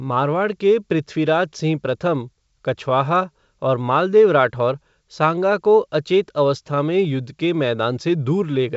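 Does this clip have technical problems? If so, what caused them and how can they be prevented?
No, there are no technical problems to trace or prevent in this speech. It comes over a G.722 wideband telephone link at 64 kbit/s, which carries the voice up to about 7 kHz, and any coding damage is faint at most.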